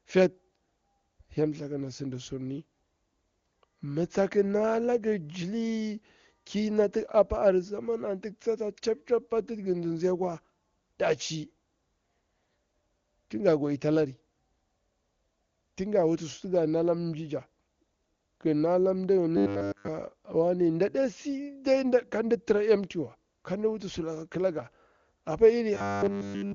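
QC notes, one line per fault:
19.37 to 19.88 s and 25.74 to 26.54 s, robotic sound from repeated short buffers: the speech collapses into a rigid, metallic buzz pitched at 100 Hz. The second burst follows "wuti sulaka akilanga apa" and runs to the end. Fresh audio is likely arriving too late, so the same 10 ms slice is looped again and again while essentially all the real signal is lost, fixing the pitch at one over that loop length. The AMR-WB audio around these bursts stays clean.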